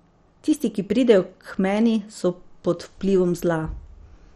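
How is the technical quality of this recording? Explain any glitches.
The technical quality is poor, with heavy coding damage across the whole clip. The likely cause is MP2 compression at a starved bitrate, which fits a rate around 56 kbps. MPEG Layer II divides the spectrum into 32 sub-bands and shares out bits among them. With so few bits, the upper bands are shut off entirely, leaving nothing above about 13.9 kHz. The surviving bands are coarsely quantised and flicker in and out. The speech sounds dull, with a gurgling, granular roughness throughout.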